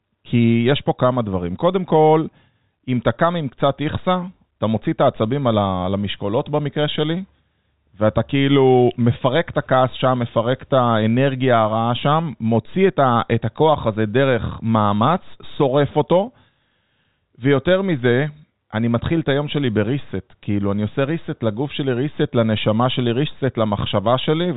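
No faults are audible in this speech; it sits in the narrow telephone band of G.711 A-law coding, with nothing above about 4 kHz.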